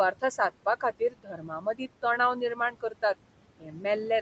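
Noise suppressor artifacts run through the whole clip. The room noise sits about 16 dB below the speech. The suppressor pulls it down by about 18 dB, band by band, frame by frame. So the background drops away in the pauses and swells back under the speech.

Speech cut by the noise suppressor first appears from 0.8 to 1.81 s. The suppressor mistakes parts of the speech for noise and turns them down, by about 18 dB at worst. Roughly half a second is affected, and those sounds come out faint and swallowed. The same thing recurs from 2.55 to 3.03 s, briefly, about 150 ms in all. It happens again from 3.6 to 3.85 s, about 300 ms in all. Both later cuts reach about 14 dB.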